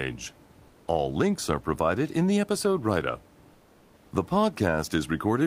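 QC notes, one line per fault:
0.67–0.87 s and 3.53–4.11 s, comfort noise in place of the background: the room noise is replaced by steady, featureless hiss, about 2–3 dB quieter, likely from Opus DTX during pauses.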